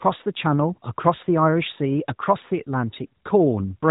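A speech recording with no technical faults to point to. It has come through the AMR-NB narrowband mobile codec at 12.2 kbps, so the band stops at 4 kHz and there is the light coding character that rate leaves on speech.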